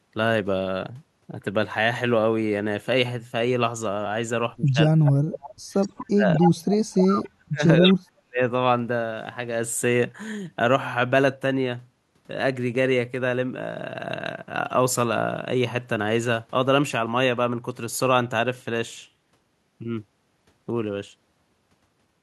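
Speech suppressed in double talk from 4.57 to 5.51 s: the talker dips by as much as about 35 dB for roughly 0.7 s in all, likely because an echo canceller turned everything down while both sides spoke at once. Inside that dip, an echo leak at 5.05 s returns the voice played on the loudspeaker 245 ms late, about 10 dB below the speech, likely because a loudspeaker end's canceller let its microphone pickup through. A longer echo leak runs from 5.81 to 6.77 s at about 5 dB down, and the speech drops again by about 40 dB from 6.06 to 6.27 s. Double talk suppression returns from 6.91 to 8.4 s, cutting the voice by up to about 40 dB for around a second. Within it, brief echoes delayed 245 ms sound at 7.24 s, faint at about 35 dB down, and at 7.84 s, strong at about 5 dB down.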